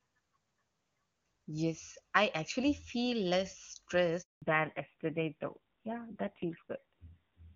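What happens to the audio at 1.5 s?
Nothing goes wrong at 1.5 s; the speech carries on intact through that moment, with no break, click or added distortion.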